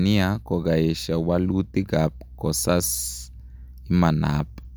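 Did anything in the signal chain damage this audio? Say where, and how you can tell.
No, nothing in this speech recording stood out as damaged by any stage of the signal chain when listening to it.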